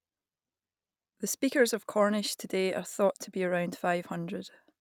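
Speech, with a resampler restarted on every block from 2.04 s, just after "speakers of", to the end. Each 20 ms block is converted alone, so its edges see wrong neighbouring samples. That leaves a 50 Hz buzz under the speech. It fits a 44.1 kHz to 48 kHz conversion.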